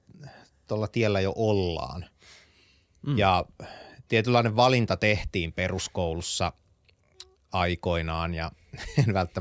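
Listening to the speech in this clip, nothing technical stood out.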